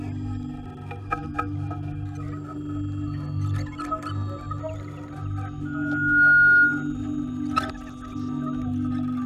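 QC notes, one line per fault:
5.65–6.94 s, loudspeaker feedback squeal: a single tone at 1.4 kHz rises out of the sound, swells over roughly half a second and holds as a piercing squeal until it stops at 6.94 s, standing about 15 dB above the rest of the audio. The microphone was hearing the loudspeaker it fed, and at 1.4 kHz the loop gain passed one, so that frequency fed on itself and grew.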